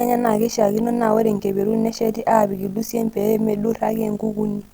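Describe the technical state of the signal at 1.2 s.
At 1.2 s the speech is carrying overlap-add ripple, and it's not local to that moment; it runs through the whole clip. The signal was chopped into windowed frames and stitched back with an overlap whose windows don't sum to a flat gain, so the level dips and swells once per frame, around 50 times a second, with about 11 dB between peak and trough. You hear it as a buzzy, robotic flutter riding on the speech.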